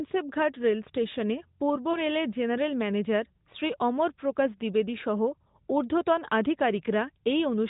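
A lost AMR speech frame at 1.92 to 2.01 s in this narrowband speech recording, between "রেলস্টেশনে পূর্ব" and "রেলের জেনারেল ম্যানেজার শ্রী", leaves a brief dip where one 20 ms frame failed and the decoder reused earlier pitch and vocal-tract settings at reduced gain.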